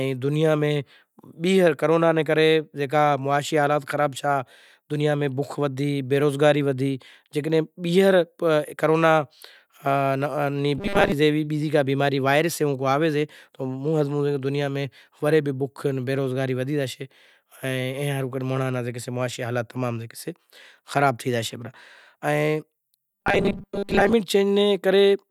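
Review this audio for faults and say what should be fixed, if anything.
Robotic sound from repeated short buffers occurs at 10.78–11.12 s, just before "جیوی بیزی کو بیماری", and at 23.11–24.13 s. It is a rigid 200 Hz buzz, likely from a 5 ms block replayed while most incoming audio is skipped. Enlarging the playback buffer would prevent these underruns.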